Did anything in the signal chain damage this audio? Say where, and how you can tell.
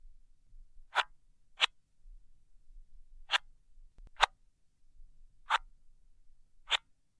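No, nothing in this audio stood out on listening as damage from any stage of the signal chain.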